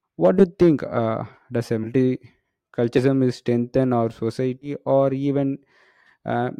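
Speech with compressed frames skipped at 0.39–0.45, 1.83–1.86, 2.97–3.00 and 4.61–4.69 s. Each time, a few 20 ms frames go missing and the sound jumps ahead by roughly 70 to 100 ms. On a spectrogram this shows as abruptly shifted harmonics at the join.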